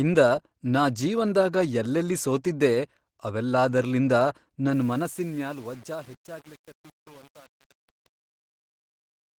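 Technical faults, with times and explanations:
throughout, Opus voice compression: the speech sounds hoarse and a little robotic, with coarse, smeared detail. This fits Opus in hybrid mode at roughly 16 kbps, where linear prediction codes the band below 8 kHz coarsely and a thin transform layer fills the top.
4.73 to 9.38 s, truncation distortion on a fade: right after "ಜೀವನ್ದಾಗ ಯಲ್ಲೆಲ್ಲಿ ಸೋತಿದ್ದೆ ಅವೆಲ್ಲಾದರ್ಲಿಂದ", the fade-out beginning around 4.7 s turns gritty toward its quiet end. The fade stage kept too few bits without dither, which fits roughly 7-bit resolution, so the quiet waveform collapses into a few square steps.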